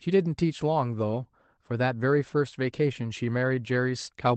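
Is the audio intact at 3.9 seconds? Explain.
Yes, the speech at 3.9 seconds comes through intact, with nothing breaking up, dropping out or glitching at that moment.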